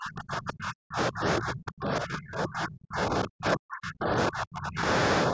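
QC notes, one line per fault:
0.00–4.85 s and 5.29–5.33 s, speech suppressed in double talk: level falls away for roughly four seconds, as deep as about 40 dB, then a brief dip of about 5 dB at the end, likely from an echo canceller muting the near talker while the far side spoke.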